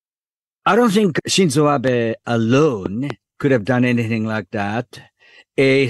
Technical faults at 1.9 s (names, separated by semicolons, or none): loud pop